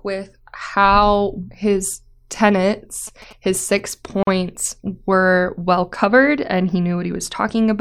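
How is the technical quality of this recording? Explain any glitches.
Two glitches interrupt the speech. From 3.07 to 3.80 s, GSM signalling bursts occur: a nearby 2G phone's radio pulses are rectified by the audio circuitry, giving a galloping dit-dit-dit of short 217 Hz buzzes roughly 25 dB below the voice. From 4.23 to 4.27 s, there is a gap at a join of encoded pieces: separately encoded segments were spliced with their encoder delay and padding left in, so a 42 ms gap with smeared edges cuts the speech before it resumes.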